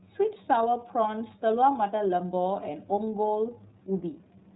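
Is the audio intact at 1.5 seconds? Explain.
No. At 1.5 s the speech carries iLBC codec damage, present across the whole clip. Each frame's excitation is coded on its own, which fits the 30 ms, 13.33 kbps mode, and nothing above 4 kHz survives, leaving a dull, plainly rough and synthetic sound.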